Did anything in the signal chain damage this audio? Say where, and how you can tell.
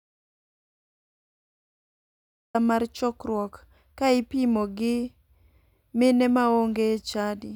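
Yes. The speech opens in an audio dropout to silence: from the first instant to 2.55 s there is silence, with no room tone, and the speech then starts abruptly mid-flow at "mar chokruok ka ipimo". The likely cause is a lost input at the capture stage, such as a disconnected device or a dropped driver link, while the recorder kept writing zeros.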